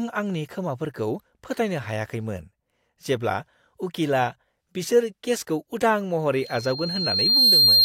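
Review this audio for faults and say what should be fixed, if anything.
Loudspeaker feedback squeal starts at 6.41 s and runs to the end of the clip. A single tone at 4.2 kHz swells over roughly a second until it stands about 10 dB above the speech. The microphone is picking up the loudspeaker it feeds, and at 4.2 kHz the loop gain has passed one, so that frequency reinforces itself on every trip around the loop. To prevent it, lower the monitor gain, move the microphone out of the loudspeaker's coverage, or notch out 4.2 kHz in the feed.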